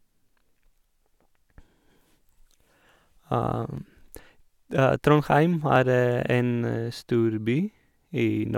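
From 1.79 s to 7.75 s there's a regular click in the speech every 1.99 s, likely clock drift buffer slips, with roughly fifty samples dropped or repeated each time.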